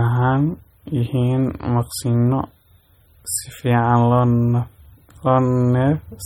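Throughout the speech there is plainly audible watery, swirling texture, with metallic chirps on s sounds and smeared onsets, and nothing above 18.6 kHz. The likely cause is MP3 compression at a low bitrate, around 32 kbps, where starved frequency lines flicker on and off between frames.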